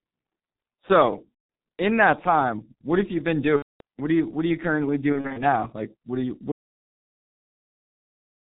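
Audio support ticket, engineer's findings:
G.723.1 codec, whole clip: speech muffled and hoarse, nothing above 4 kHz, consonants smeared. The heavy damage points to a low-rate stream of roughly 6 kbit/s with slow voice-model updates.

VoIP packet loss concealed by the speech codec at 1.34–1.49 s, 3.56–3.81 s (after "what have you been"), and 5.12–5.41 s (after "are you currently"). The decoder fills each gap by repeating its last pitch and filter with falling gain, leaving a buzzy tone or coloured noise that fades. The first two gaps are continuous, 150 ms and 240 ms, which fits five and eight lost 30 ms frames. The third is scattered bursts over 240 ms, none longer than 30 ms.

Audio dropout to silence from 6.52 s to end, right after "what are you". The signal cuts mid-phrase to silence with no room tone. Likely input or link loss while the recorder kept writing.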